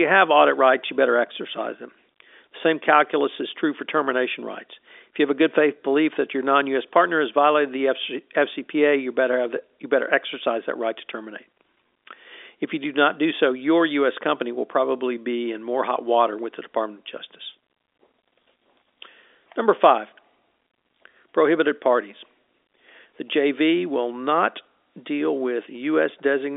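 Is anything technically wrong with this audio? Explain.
No, nothing technically wrong.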